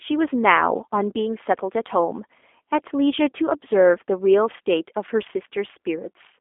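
G.729 codec damage runs throughout this speech: rebuilt from pulse excitation, it sounds rough and synthetic, confined to roughly 250 Hz to 3.5 kHz, which fits 8 kbit/s.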